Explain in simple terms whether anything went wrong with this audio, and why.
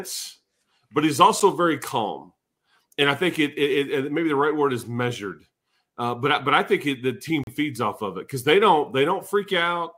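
The speech cuts to silence twice: an 8 ms gap at 1.40 s, between "but he's" and "very calm", and a 37 ms gap from 7.44 to 7.47 s, between "think it the team" and "feeds off of it". Each then resumes, likely a Bluetooth stall: interference delayed the wireless audio and the headphones briefly ran out of sound to play.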